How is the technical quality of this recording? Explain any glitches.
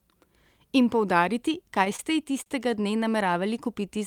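The recording has one glitch, a stretch of repeated stalls (stutter) from 1.79 to 3.02 s. Packets reached the receiver late or more slowly than playback consumed them, so the jitter buffer kept running dry. Each time it did, the last sound was stretched to bridge the gap, eleven times in all, each no longer than 29 ms. That adds about 135 ms of filler, roughly a tenth of the span, with nothing actually lost. The speech drags and judders. On a spectrogram, the harmonics flatten into brief frozen bands at each stall. The waveform shows short repeated, near-periodic chunks breaking the natural envelope.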